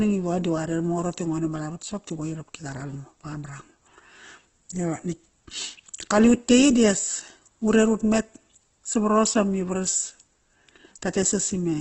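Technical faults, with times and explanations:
Throughout, Opus compression is the likely cause: band-filling leaves the speech grainy and rough, not swirly like MP3, with nothing above 8.1 kHz, fitting about 12 kbps.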